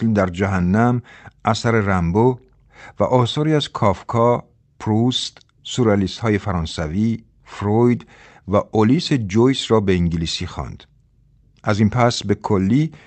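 Recorded speech passing through a normal call path, with the upper frequencies ending around 8 kHz as a call codec set to that bandwidth would leave them, shows no technical faults.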